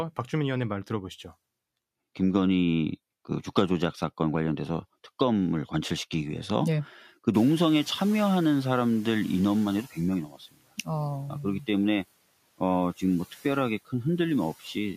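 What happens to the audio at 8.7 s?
At 8.7 s you're in the middle of the noise suppressor catching up, from 7.33 to 9.95 s. The room noise jumps sharply around seven and a half seconds, the suppressor's estimate lags, so the noise leaks through louder, then sinks by about 9 dB as it adapts.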